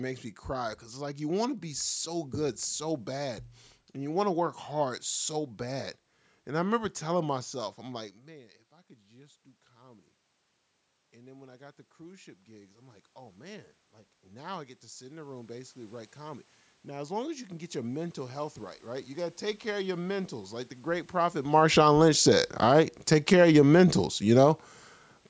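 A speech recording where the automatic gain is falling near the end: from 21.39 s to 24.7 s the level sinks by about 8 dB, and the room noise drops right along with the voice, which is the giveaway that the gain control decided the input was too loud or its background noise too strong and pulled itself down. The talker also shifts position around 21.5 s, but that movement doesn't account for the background sinking too.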